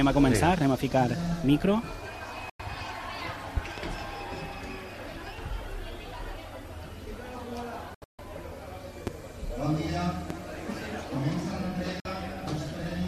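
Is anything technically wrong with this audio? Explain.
Yes. There are digital broadcast dropouts at 2.50 to 2.60 s, 7.94 to 8.19 s and 12.00 to 12.06 s. The receiver lost valid frames and muted until good ones returned, so the sound fades out within a few milliseconds and leaves silent gaps. The middle gap is broken into several short holes, the longest about 0.14 s, and whatever was sent during them is gone.

There are loud pops at 3.57 to 3.80 s (two in quick succession), 9.07 to 9.10 s and 10.30 to 10.33 s. These are sudden voltage pulses, likely from a switch, plug or static discharge, shaped by the following circuits. Each is a sharp pop well above the level of the sound, which carries on underneath.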